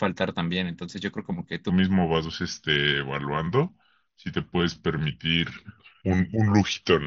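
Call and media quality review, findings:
Section at the wrong speed, 1.69 s to end: speech drops to 0.85x, slower and about three semitones lower, pitch and tempo shifting together. Likely a playback or resampling stage on the wrong clock. Bandwidth stops near 8 kHz, as expected through mSBC.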